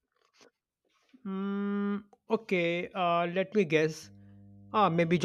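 A speech recording with mains hum entering from 4.03 s and running to the end at 5.25 s: a steady 50 Hz tone roughly 25 dB below the speech, picked up from a ground loop or nearby transformer. Unlike rumble or wind noise, its pitch never wavers.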